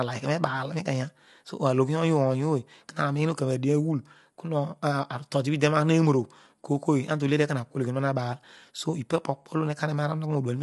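From start to finish the speech carries plainly audible coding damage, and the top of the spectrum stops at about 11.5 kHz, with nothing above it. The signature fits low-delay AAC compression, likely AAC-ELD as used for video calls, at a bitrate around 32 kbps. That codec splits each short, low-delay frame into roughly 500 frequency lines and spends its limited bits unevenly across them, leaving the upper band cut away and the remaining detail audibly coarsened.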